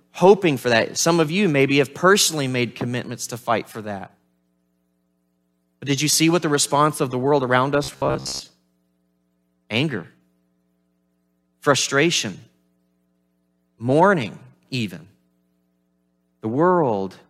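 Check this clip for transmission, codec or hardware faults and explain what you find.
One fault turns up. From 7.84 to 8.41 s, audio likely arrived too seldom, so a 15 ms slice kept repeating, causing robotic sound from repeated short buffers: a metallic 66.7 Hz buzz.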